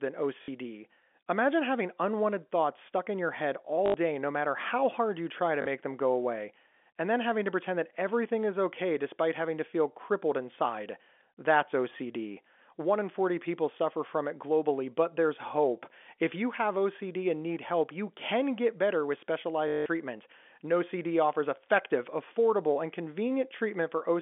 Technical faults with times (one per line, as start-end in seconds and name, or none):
0.42-0.48 packet loss with last packet repeated
3.86-3.94 packet loss with last packet repeated
5.62-5.66 packet loss with last packet repeated
19.68-19.86 packet loss with last packet repeated